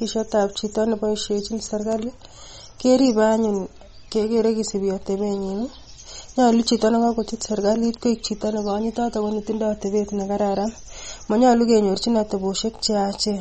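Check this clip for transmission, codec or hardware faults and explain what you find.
One codec fault runs through the whole speech clip. Nothing is heard above 8.4 kHz, and the damage is plainly audible. The likely cause is MP3 compression at a low bitrate, around 32 kbps. Starved of bits, the encoder drops the treble and flickers weak frequency lines, giving a watery, swirly sound.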